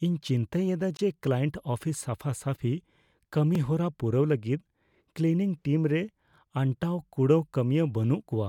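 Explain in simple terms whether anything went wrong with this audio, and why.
Two blocks of digital silence interrupt this speech: a 20 ms hole from 0.97 to 0.99 s, after "ᱤᱧ ᱪᱤᱱᱛᱟᱹᱭᱮᱫᱟ", and a tiny one at 3.55 s, before "ᱯᱩᱨᱟᱹᱣ ᱞᱟᱹᱜᱤᱫ ᱠᱞᱤᱱᱤᱝ ᱴᱤᱢ". The sound cuts out and returns with no fade. The longer block is heard as a brief gap, the shorter as a tick. That abrupt on-off sets it apart from a fading dropout.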